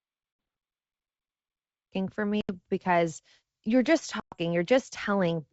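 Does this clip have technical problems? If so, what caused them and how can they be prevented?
Yes. Packet loss on an ADPCM call leaves silent holes at 0.33 s (60 ms), 2.41 s (80 ms) and 4.20 s (120 ms). The decoder's predictor then mismatches the sender's, so speech resumes slightly distorted. Spectrograms show hard-edged blank columns. Packet-loss concealment with state resynchronisation prevents this.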